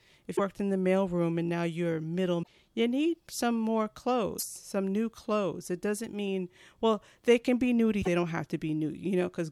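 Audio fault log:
0.33–0.40 s, 2.39–2.48 s, 4.35–4.44 s, 7.98–8.08 s: damaged data in a compressed stream. Short chirps or squawks of 70 to 100 ms sit just before "in the mailroom and", between "and now you're middle" and "you need some more", and after "doesn't mean well they". Corrupted frames are misdecoded while the decoder loses sync and hunts for the next header. A spectrogram shows abrupt vertical smears of garbled energy, and the waveform shows hard-edged discontinuities at each burst.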